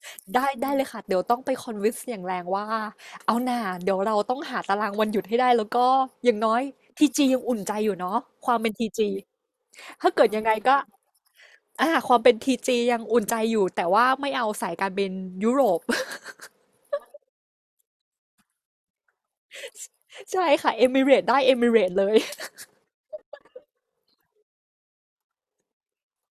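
Listening to the speech recording, nothing stood out as technically wrong at any point.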